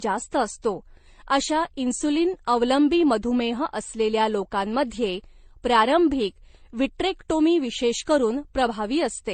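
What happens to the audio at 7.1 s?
At 7.1 s, as throughout the clip, the speech carries transcoding between lossy codecs: artefacts from different codecs overlap, and nothing is heard above 9 kHz. The mixed artefacts suggest low-bitrate Vorbis, then MP3, likely ending in HE-AAC, each re-encoding the previous damage.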